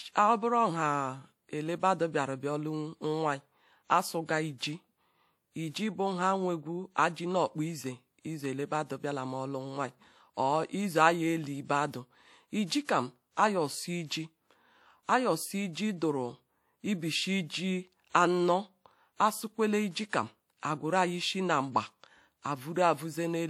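Pre-echo precedes sharp speech attacks at 12.66, 12.85, 19.91 and 20.09 s. In each case the transform codec's quantisation noise, sized for the loud onset, spreads 38 to 40 ms ahead of it into the quiet gap, heard as brief hiss before a softened, smeared attack.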